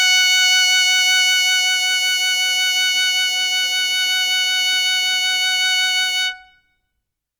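Listening through the music, nothing stood out as a technical fault at any point.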